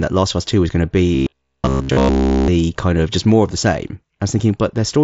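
A speech clip in which, from 1.15 to 2.48 s, after "was going to" and up to "kind of just more", the sound turns into a rigid, metallic buzz at about 66.7 Hz that only loosely tracks the speech. This is robotic sound from repeated short buffers, likely caused by audio arriving too slowly, so a stretch of roughly 15 ms is looped to fill the gaps while the real audio is skipped, through essentially the whole stretch. The path runs through the Bluetooth mSBC headset codec, which limits the band to 8 kHz.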